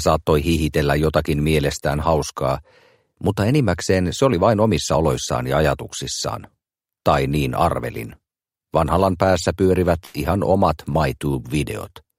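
A burst of packet loss hits the audio from 10.05 to 10.16 s. About 80 ms of the stream failed to arrive in time, and the receiver covered the gap by extending the last sound it had and letting it fade as the hole lengthened. The result is a held, decaying stretch, after which the audio picks up further along, with the missing section simply gone. A short concealed packet loss follows from 10.92 to 10.96 s, where roughly 20 ms went missing. The decoder patched this smaller gap by continuing the preceding sound and blending back into the real signal, which leaves a brief smear or wobble rather than an audible dropout.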